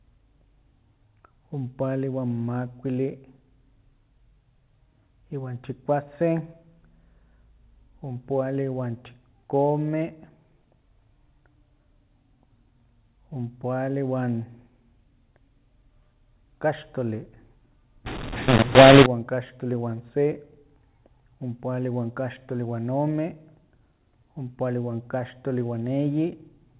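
From 18.06 to 19.06 s the speech turns harsh and gritty for one second: a mu-law and A-law mix-up. The G.711 telephone stream, coded as mu-law at 8,000 samples a second, is decoded here as if it were A-law. The two logarithmic scales map the same 8-bit codes to different amplitudes, so sample levels come out scrambled. Some are too loud and some too soft, and the quietest ones are pushed well above silence. Gaps within that second fill with noise.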